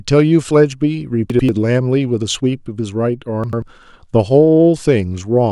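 At 1.30 to 1.49 s and again at 3.44 to 3.62 s, chunks out of order: a 92.88 ms block plays one chunk late, swapping two blocks and leaving a brief jumbled moment with hard joins.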